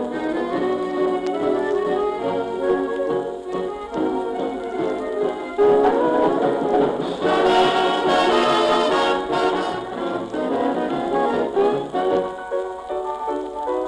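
Hard clipping flattens the peaks of the audio from 5.62 to 5.88 s and again from 7.33 to 9.02 s, where the signal is driven about 4 dB past what a stage can pass. The squared-off tops add a crackly edge with sharp high harmonics, unlike the rounder, gentler thickening of soft saturation.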